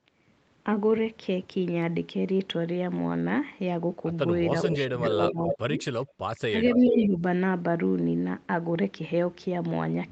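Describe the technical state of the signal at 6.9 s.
At 6.9 s two faults overlap. An echo leak runs from 6.70 to 7.07 s: a delayed copy of speech sits under the live sound, trailing it by about 0.43 s and only about 5 dB quieter. The likely cause is a far-end loudspeaker whose echo canceller let part of its microphone pickup return down the line. On a spectrogram this appears as a ghost set of harmonic bands shifted right by that delay. In the waveform it shows as added energy where the live signal alone would be simpler.

Speech suppressed in double talk spans 6.76 to 7.23 s. With both sides active, the canceller likely pulled the talker's level down along with the echo, by around 10 dB at its deepest. In total, about a third of a second is affected in patches. It sounds like the voice sinking or briefly dropping out. In the waveform the envelope shrinks abruptly in short sections. On a spectrogram the bands fade, below the 8 kHz ceiling of the call path.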